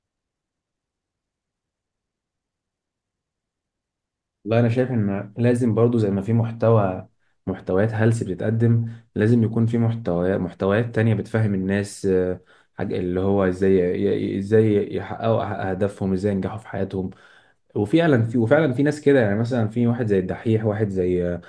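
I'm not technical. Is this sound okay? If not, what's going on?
Yes, no faults to report.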